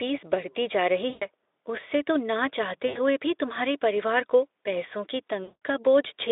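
Three dropouts show VoIP packet loss concealed by the speech codec: after "बढ़ती जा रही" (1.09–1.26 s), between "तो ना" and "भी तुम्हारे परिवार को" (2.87–3.0 s), and after "परिवार को पैसों की" (5.43–5.61 s). Each time, the Speex decoder fills the gap by stretching the last sound into a buzzy tone or coloured noise that fades. The first gap lasts about 120 ms, the second about 80 ms and the third about 180 ms.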